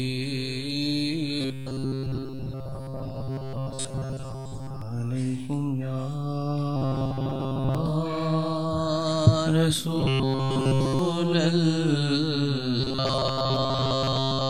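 Robotic sound from repeated short buffers appears from 1.41 to 4.82 s, 6.76 to 7.75 s, 10.00 to 10.99 s and 12.81 to 14.49 s. A rigid, metallic buzz at 133 Hz sits on the audio. That fits a loop of about 7.5 ms, likely from audio arriving too seldom so that the last short buffer was replayed in place of skipped material. Repeats dominate most of each stretch, and take over the whole of the third.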